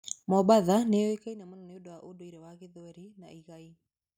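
No technical faults can be heard in the speech, and the signal holds together without any dropout, distortion or timing disturbance.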